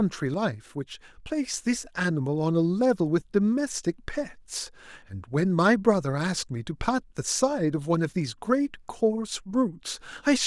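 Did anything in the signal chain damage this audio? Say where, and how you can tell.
Yes, there's a sudden gain jump: at 0.34 s the speech and the background noise both drop by about 5 dB in one step, then snap back up at 1.54 s. That's likely a digital gain setting changed sample-to-sample in processing, with no ramp to smooth it.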